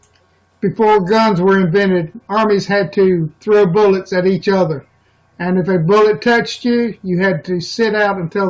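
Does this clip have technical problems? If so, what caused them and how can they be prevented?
No, nothing technical goes wrong anywhere in this speech recording, so there's nothing here that needs fixing or preventing.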